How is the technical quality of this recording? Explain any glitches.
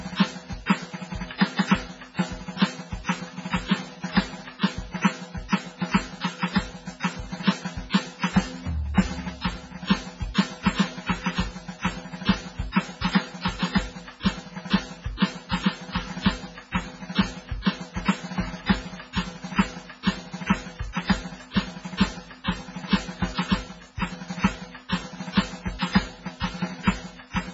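The quality is poor: the music carries heavy compression damage from start to finish.

MP3 compression, throughout the clip: nothing is left above 7.6 kHz, so the top end is flat and dull. The likely cause is an MP3 encoder starved of bits, which fits a very low rate of around 16 kbps. It drops the treble at a fixed point and discards quiet frequency components that flicker in and out between frames. The result is a watery, swirling texture, metallic chirps on bright sounds, and smeared attacks.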